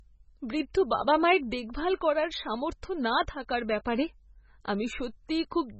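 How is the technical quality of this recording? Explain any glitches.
The quality is poor, held back by heavy compression damage across the whole recording.

Throughout, the sound most likely went through MP3 compression at a very low bitrate, consistent with roughly 16 kbps. Starved of bits, the encoder cut everything above 8 kHz and dropped quieter frequency components, letting them flicker in and out between frames. The speech therefore sounds dull and muffled, with a watery, swirling texture, chirpy metallic edges on sibilants, and blurred onsets.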